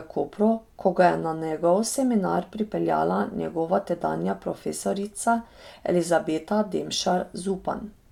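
No technical faults can be heard anywhere in the recording; the speech signal stays continuous and stable throughout.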